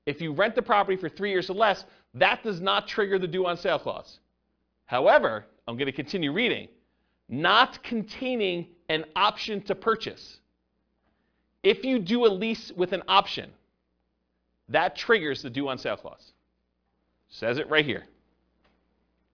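No technical faults are audible anywhere in the speech recording.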